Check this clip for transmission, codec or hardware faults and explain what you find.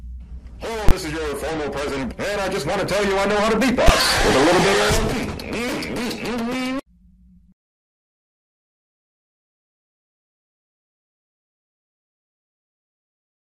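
Two faults of one kind. From 0.89 to 0.91 s there is a loud pop, a silent gap of about 21 ms, then another pop, which fits a 1024-sample block. At 3.88 s there is a single bang of about 11 ms, which fits a 512-sample block. Both are invalid numbers at full scale: a calculation produced infinite or invalid values that pinned the output to full scale for a whole block.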